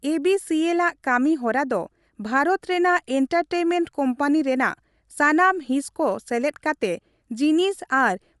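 From start to finish the speech has a plainly audible grainy, breathy edge, and nothing sounds above 11.5 kHz. Bluetooth LC3 compression is the likely cause. This transform codec drops upper-spectrum detail frame by frame and patches it with shaped noise, and the artefacts fit 10 ms frames at around 48 kbps. On a spectrogram the energy stops at a flat ceiling near 11.5 kHz, with a speckled, blotchy texture in the bands beneath it.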